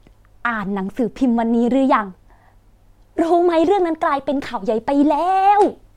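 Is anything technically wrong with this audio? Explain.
No, no faults are audible.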